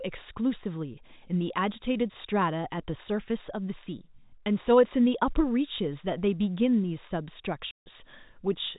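Speech over G.711 telephone coding, where a run of packets went missing and the receiver substituted silence, a packet loss filled with silence that cuts a 150 ms hole with hard edges from 7.71 to 7.86 s, consistent with five lost 30 ms packets.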